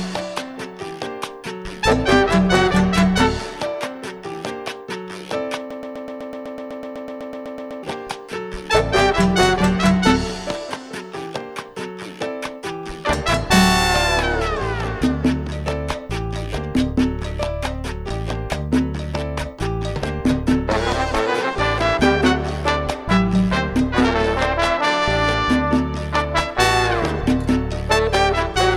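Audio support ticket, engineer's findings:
Broken-record loop, 5.71 to 7.83 s. A 125 ms fragment repeats identically 17 times, back to back, then normal audio resumes. Likely a stalled player, encoder or stream re-sending the last fragment it held. The audio due in that window is lost, not delayed. Unlike echo or reverb, there is no decay between repeats, and each copy plays at full level. Unlike dropout stutter, there are no silent gaps, and the loop period stays fixed.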